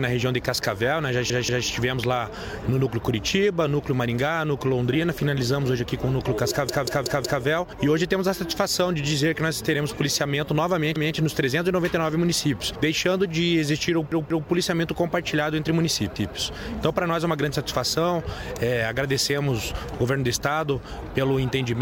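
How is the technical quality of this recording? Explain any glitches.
The quality is let down by a repeated buffer, which turns up five times: at 1.3 to 1.67 s, 6.69 to 7.43 s, 10.96 to 11.15 s, 14.12 to 14.49 s and 16.16 to 16.35 s. New audio came in late, so the device replayed the last chunk of about 186 ms, which fits an 8192-sample buffer. You hear a stutter with a hard join at each repeat. The chunk plays one to four extra times, with the longest run around 7 s, and nothing seems to get lost.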